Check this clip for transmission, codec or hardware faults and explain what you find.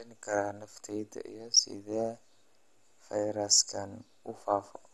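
There's one codec problem, and it runs through the whole speech clip. It sounds dull, with nothing above 12.2 kHz and a gurgling, granular texture on top, which points to MP2 compression as the likely cause, at a rate around 64 kbps. Starved of bits, the encoder shuts off upper sub-bands and quantises the remaining ones coarsely, so the damage is plainly audible.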